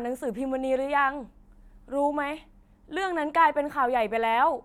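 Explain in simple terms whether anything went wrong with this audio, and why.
Nothing went wrong with this audio, so there is nothing to explain.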